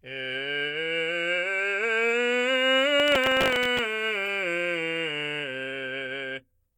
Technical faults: processor overload crackle; corrupt frame decoded

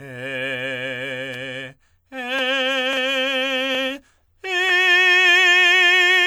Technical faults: generation loss

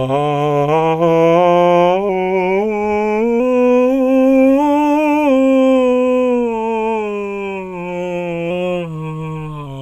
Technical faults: drift correction step

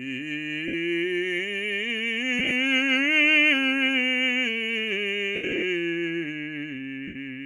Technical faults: lost LE Audio frames

